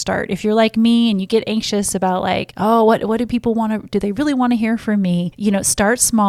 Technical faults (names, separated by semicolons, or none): none